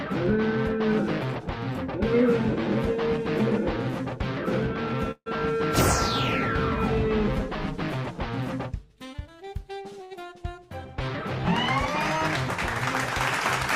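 At 5.11 s the sound halts for about 0.17 s in a call audio freeze: the last sound hangs on as a fading buzz for roughly 90 ms, settling into about 60 ms of silence, likely because delayed packets emptied the jitter buffer. Playback then resumes exactly where it stopped.

At 10.04 s a short stall from a late packet stretches the current sound by about 67 ms, never reaching silence, then continues unbroken. Both insert delay rather than dropping audio; the stall is shorter and holds the sound instead of fading out.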